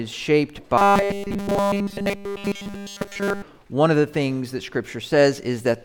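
Robotic sound from repeated short buffers runs from 0.78 to 3.42 s as a rigid, metallic buzz fixed at 200 Hz. The likely cause is new audio arriving too seldom, so a 5 ms segment loops over and over, replacing almost all of the real signal.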